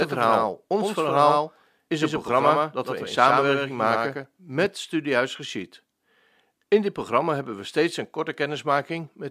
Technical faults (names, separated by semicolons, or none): doubled audio track